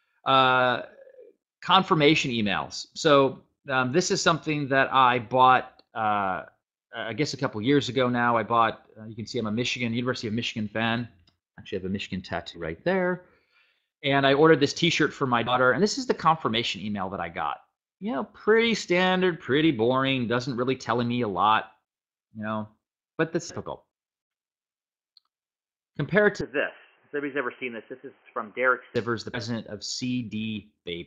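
From 26.41 s to 28.96 s the sound abruptly turns narrow and boxy, with nothing above 3.1 kHz, a level drop of around 5 dB, and a new background noise floor sitting roughly 35 dB below the signal. There is no gap at the changeover. The most likely cause is the input switching to a poorer device, such as a headset's call profile, whose restricted bandwidth and different noise and gain replace the original microphone's character.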